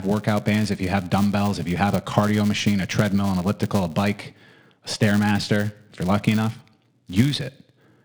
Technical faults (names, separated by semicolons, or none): filter restarted on every block